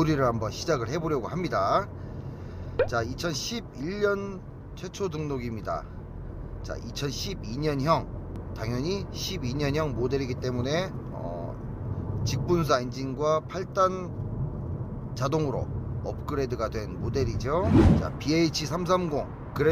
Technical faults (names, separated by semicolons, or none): none